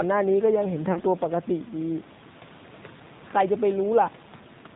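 Throughout, the speech carries plainly audible AMR narrowband mobile codec damage. Nothing above 4 kHz comes through, and the pulse-driven vocal tract model leaves the voice buzzy and synthetic, which fits a low AMR-NB mode around 7.4 kbps. The room noise, about 25 dB below the speech, is coloured by the same processing.

From 0.92 to 1.02 s, lost AMR speech frames take out about 40 ms of audio. The decoder stretches the last good pitch and spectral settings with falling gain, so the sound smears and dips, then returns weak or rough for a moment.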